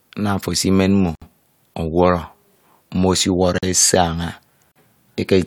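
A block of digital silence cuts the speech three times: at 1.15 s for 64 ms just after "ofo esimen mmo", at 3.58 s and at 4.72 s for about 43 ms each, which fits a 2048-sample buffer left unfilled. Each gap drops abruptly to silence and back.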